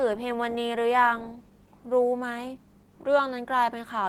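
From start to end, the speech sounds hoarse and slightly robotic, while content extends to about 20.2 kHz. This is Opus voice compression in hybrid mode, coding the lower band by linear prediction and the top with CELT, which fits a bitrate around 16 kbps.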